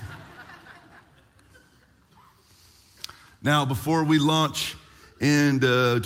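Nothing goes wrong anywhere in the audio, so there's no technical fault to point to at any moment.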